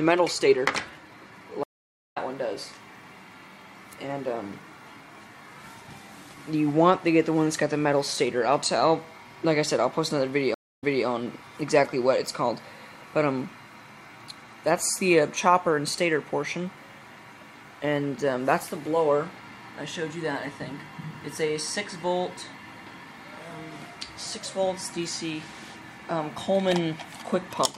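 Stream reconnects at 1.63–2.18 s and 10.54–11.06 s: the connection dropped and a fresh decoder restarted mid-stream. First, 0.45 s of silence, then the sound resumes about 0.3 s further on. Second, 0.2 s of silence, then 0.31 s of earlier audio repeats.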